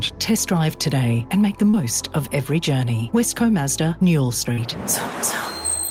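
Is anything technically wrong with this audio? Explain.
Yes. Two instances of short concealed packet loss occur, at 1.69 to 1.75 s and 4.53 to 4.59 s, each hiding about 40 ms of lost audio. The receiver extended the preceding sound to bridge each gap, then crossfaded back. Each one is heard as a brief smear or wobble. On a spectrogram, the harmonics or noise texture flatten into a uniform stretch, and the waveform shows a short, overly regular patch.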